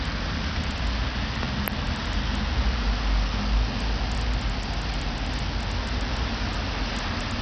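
A recording of everyday sound that has likely passed through Bluetooth SBC compression at a starved bit pool, consistent with a low rate around 64 kbps. The coarse sub-band quantisation leaves heavy gritty, aliased noise throughout, and nothing survives above 14.5 kHz. At 2.38 to 2.42 s, a sudden voltage step, likely from a switch, plug or driver glitch, injects a single loud pop a few decibels above the surrounding sound, while the audio continues beneath it.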